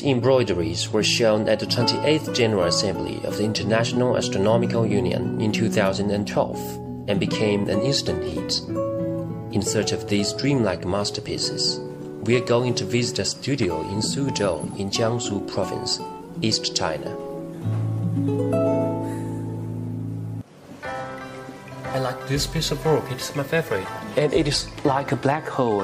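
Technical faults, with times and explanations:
Nothing technical stands out here; I listened all the way through and didn't catch a single problem worth flagging.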